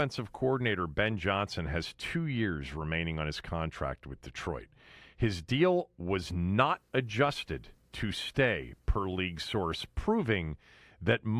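Listening closely to the speech, nothing stood out as a technical fault at any point.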